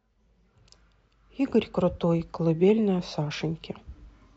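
At 3.10 s, running to 3.15 s, the speech is interrupted by a corrupt frame decoded: a short blip of misplaced energy lasting about 50 ms. Flipped bits in the compressed data left the decoder reading wrong gains and spectral codes, and it rendered them anyway, so energy lands at frequencies unrelated to the speech. The damage covers roughly a couple of frames, peaking somewhere around -25 dBFS, and it sounds like a brief chirpy burst of noise.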